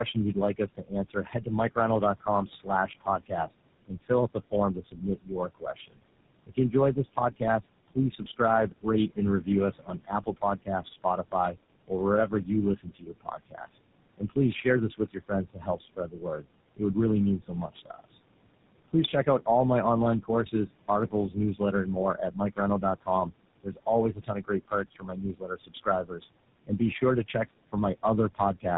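Throughout the speech, the background pumps down between phrases and surfaces under them. These are noise suppressor artifacts: the suppressor cuts what it judges to be steady noise by about 21 dB, frame by frame, so the room noise, about 18 dB below the speech, keeps appearing and vanishing.

The speech is also rough, muffled and warbly, with nothing above 3.8 kHz. This is tandem speech coding. The voice passed through two speech codecs in series, with GSM full rate among them, and each coder worked on the already degraded output of the last.

From 0.14 to 18.1 s, soft consonants and word endings sound swallowed, with about 5 s affected in total and drops of up to about 22 dB. This is speech cut by the noise suppressor, which took those parts for noise. The same happens from 20.21 to 27.75 s, with about 2 s affected and drops of up to about 19 dB, and again briefly from 28.35 to 28.65 s, with drops of up to about 18 dB.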